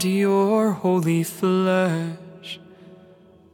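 No technical faults can be heard anywhere in the signal.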